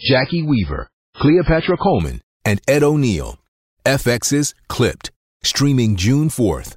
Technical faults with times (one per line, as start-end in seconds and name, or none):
0.00-2.00 adaptive stream starting at a low bitrate